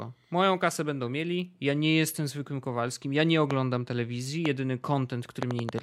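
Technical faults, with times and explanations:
3.51 to 5.80 s, train of clicks: about seven sharp, similarly shaped pops at an uneven pace averaging 2.6 per second, rising well above the speech and audible in its gaps, the likely result of interference or an interface repeatedly injecting brief pulses.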